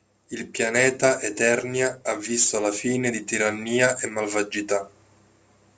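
Speech, with aliasing throughout. The rate was lowered without filtering, so content above 8 kHz folds back to wrong pitches. Sibilants turn gritty and metallic. The folded energy sits just below the signal. The band stops hard at 8 kHz, which points to a 16 kHz rate.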